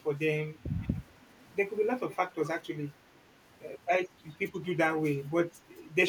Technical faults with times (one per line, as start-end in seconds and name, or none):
0.74-1.08 echo leak
2.09-2.16 echo leak